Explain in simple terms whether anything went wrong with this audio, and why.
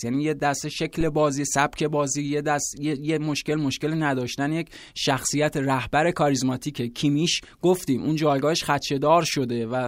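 Something did go wrong, just after the one-second mark. From 1.01 to 1.18 s there's a phantom power thump, a deep, dull thud that dies away within about 40 milliseconds. It happens when the microphone's power supply is switched on or off while the input is live, and that sudden electrical jump gets through as a low boom. Unlike a bump to the microphone or a breath pop, it has no rattle or puff of air, just a clean, short electrical thud.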